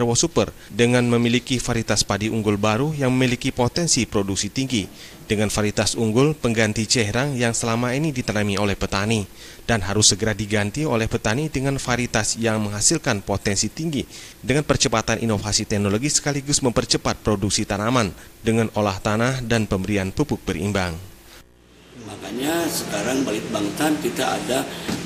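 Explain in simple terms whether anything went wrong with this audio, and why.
Nothing went wrong with this audio, so there's no problem to explain.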